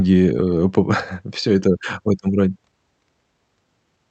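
Clock drift between sender and receiver runs through the whole speech clip, with the sender's clock roughly five percent fast. Samples arrive faster than the receiver plays them out, so its jitter buffer keeps filling and the timing never settles, giving a slightly hurried, uneven pace.

From 0.43 s to 3.97 s, repeated timing corrections occur as the receiver drops short pieces to keep the buffer in check, with the audio running at about 105% speed. The cuts are small and irregularly spaced, heard as faint hiccups and a wavering tempo within a call-codec band that tops out near 8 kHz.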